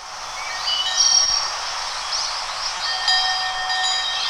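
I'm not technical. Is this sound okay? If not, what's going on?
No, there are two short glitches, at about 1.23 s and again at 2.77 s. Each is a short concealed packet loss: a tiny piece of the audio, about two hundredths of a second, arrived too late to be played. The player covered the gap by stretching out the sound just before it and then blending back in, so you hear a brief smear or wobble rather than silence. A plain dropout would leave a hole, and a click would be a sharp snap.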